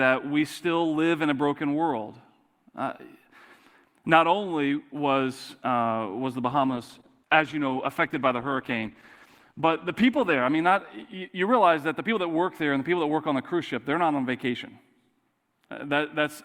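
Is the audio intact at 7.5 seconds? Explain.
No. A call bitrate drop runs from 6.5 to 12.15 s. The encoder's bit budget was cut to what sounds like about 13 kbps, so the sound turns rough and muffled. Unlike packet loss, there are no gaps.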